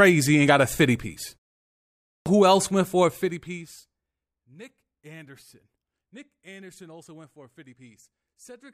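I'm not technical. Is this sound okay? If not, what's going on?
No, it isn't. At 1.88 s, after a pause of a bit over half a second, about 0.38 s of speech is simply missing. This is a clipped start after a pause: the playback device dozed off during the quiet and woke too late. Unlike a pause that is just muted, actual sound is lost.

From 3.01 to 4.17 s the volume falls steeply in small jumps, about 20 per second, and each jump adds a tiny click. The result is zipper noise, a ticking buzz. A smooth fade would sound clean and even.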